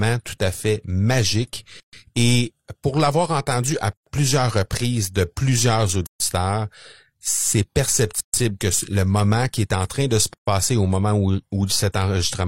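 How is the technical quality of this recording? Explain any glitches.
The speech is interrupted by a regular series of short silences. There is a gap at a join of encoded pieces at 1.80, 3.93, 6.07, 8.20 and 10.34 s, each about 130 to 136 ms long. The first of these with words around it falls between "pour l'avoir entendu à" and "plusieurs reprises de plusieurs". Separately encoded pieces were joined without trimming, so encoder delay and final-frame padding remain. Unlike random dropouts, these gaps recur exactly every 2 s, and speech resumes where it stopped.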